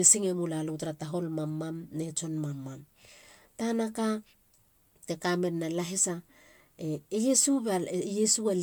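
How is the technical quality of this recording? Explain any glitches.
The technical quality is held back by generation loss that runs through the whole speech recording. The sound is swirly and hollow, with soft, smeared attacks, more than a single decent encode would leave. That points to the audio likely having been run through MP3 about three times, with each pass quantising on a fresh frame grid and stacking its noise and spectral gaps. The top end still reaches 20.1 kHz, which fits around 128 kbit/s.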